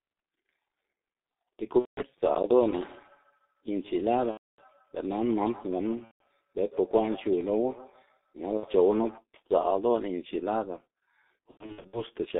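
From start to finish the speech is muffled and hoarse, with consonants smeared and nothing above 3.7 kHz or below about 250 Hz. This is the G.723.1 codec at 6.3 kbit/s, damaging the sound heavily. It codes the signal in 30 ms blocks with a coarse, slowly updated model of the vocal tract, so quick articulation blurs and the band is held to that narrow telephone range.

At 1.79 to 2.01 s, 4.31 to 4.62 s, 6.05 to 6.22 s, 8.57 to 8.66 s and 11.51 to 12.02 s the sound stretches into a buzzy, fading tone or tinted noise and stays weak briefly afterwards. This is VoIP packet loss concealed by the speech codec. The gaps are 180, 270, 150, 60 and 270 ms, which fits runs of whole 30 ms frames. The last gap is broken into pieces, the longest 90 ms. The decoder carries its last pitch and filter forward while turning the level down, and recovery lags because each frame depends on the one before.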